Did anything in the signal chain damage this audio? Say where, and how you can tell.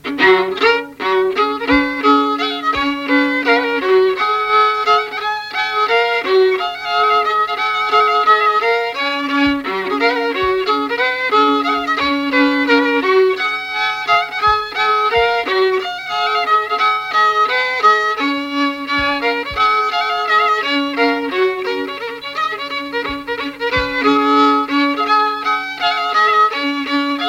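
No, no chain damage heard.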